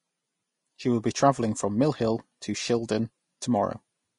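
Throughout, the speech sounds hissy and grainy, with nothing above about 10.6 kHz. This is likely Vorbis compression at a low rate, near 33 kbps, coarsely quantising the treble.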